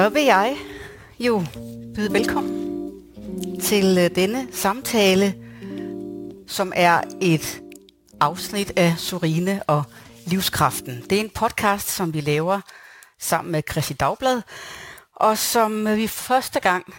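Crude rate conversion runs throughout the clip. The rate was raised without filtering, apparently by repeating nearby samples, which fits a step from 44.1 kHz up to 48 kHz. The patterned error, roughly 20 dB below the signal, produces an inharmonic, gritty fizz tracking loud and high sounds.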